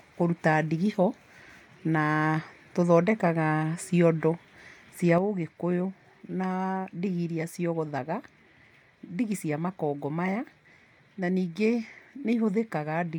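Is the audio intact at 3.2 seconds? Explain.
Yes, at 3.2 seconds the speech runs cleanly with no dropout, click or other fault.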